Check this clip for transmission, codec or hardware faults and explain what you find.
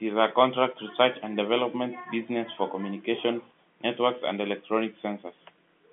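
No faults found.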